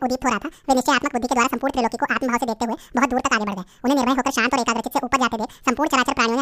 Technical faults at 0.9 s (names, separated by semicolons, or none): audio read two samples at a time (double speed)